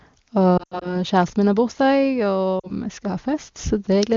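Lost AMR speech frames at 0.57 to 0.97 s, before "kjæresten min har bursdag", and at 2.59 to 2.71 s, before "vi skal ha". Corrupted frames forced the wideband decoder to reuse the last pitch and vocal tract settings at falling gain, so the speech briefly dips, warbles and drops toward silence.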